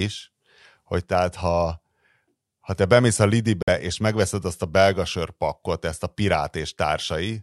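At 3.62 to 3.69 s, between "ha te bemész a" and "és megveszed azt a", the speech drops out for 52 ms, most likely a Bluetooth stall while resent packets arrived. The waveform shows a flat gap, and the spectrogram a blank vertical band across all frequencies.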